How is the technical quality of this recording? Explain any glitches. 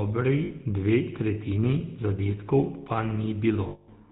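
The speech has plainly audible codec damage throughout and two dropouts where the sound smears into a ringing tone.

GSM full-rate codec, throughout: the vocal tract is modelled and excited by evenly spaced pulses with only every third excitation sample kept, a sound that fits the 13 kbps full-rate codec. Nothing above 4 kHz survives, and the speech has a buzzy, gravelly roughness.

Lost GSM frames, at 0.44 to 0.52 s and 3.68 to 3.89 s: the decoder repeats the last good frame's settings. The short first gap, which fits three lost 20 ms frames, leaves a brief metallic ring. The 200 ms second gap holds the metallic ring longer.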